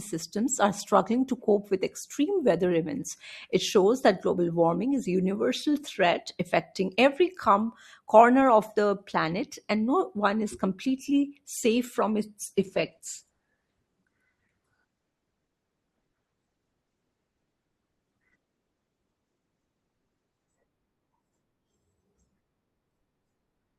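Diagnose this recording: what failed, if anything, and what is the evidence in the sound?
From 12.46 s to 20.46 s the speech abruptly takes on heavier codec artefacts, then snaps back with no gap at either edge. This is an adaptive stream at a lower bitrate: a network slowdown made the player switch for 8 s from a rendition consistent with Opus around 64 kbit/s to one nearer 12 kbit/s.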